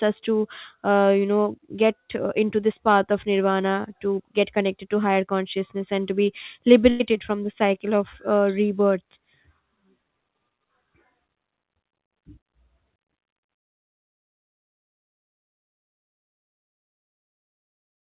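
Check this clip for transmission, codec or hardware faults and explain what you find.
There's one fault, a burst of packet loss at 6.9 to 7.02 s in the speech. A run of packets never arrived in time, so the receiver stretched the last sound for about 95 ms, fading it into a held buzz or hiss, then picked up again with roughly 100 ms of audio gone. The narrow band, with nothing above 4 kHz, fits the G.711 mu-law codec the call path ran through.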